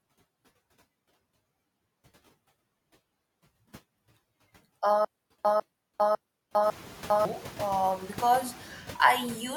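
From the start, noise suppressor artifacts run through the speech: steady background noise is pulled down by about 15 dB in each band, frame by frame, so it dips between words and swells beneath them. A spectrogram shows a mottled, flickering noise floor that brightens under speech energy.

From 5.05 to 7.25 s comes a stutter with silent gaps: a 150 ms fragment plays, then about 402 ms of digital silence, repeating every 551 ms for four repeats. This likely reflects a stalled stream replaying its last buffer, and the waveform shows identical blocks separated by flat silent stretches. Around 6.5 s the room noise rises by about 18 dB, sitting about 18 dB below the speech.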